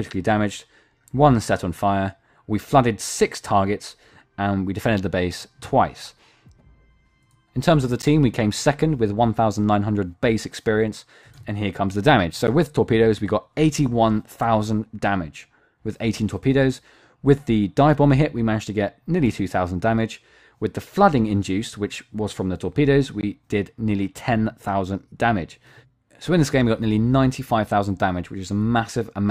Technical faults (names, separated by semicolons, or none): block of digital silence